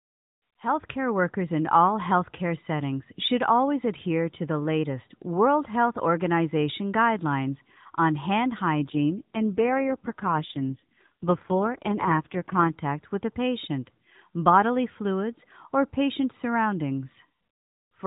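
An AMR rate drop runs from 8.80 to 12.75 s, starting just after "guidelines on hand" and recovering just before "with a patient bodily". The narrowband mobile codec, with nothing above 4 kHz, steps down to a lower bit rate so more of its capacity can go to error protection on a weak link. The speech turns rougher and more synthetic, which fits a move from 12.2 to 4.75 kbps. The bandwidth stays the same and there is no gap.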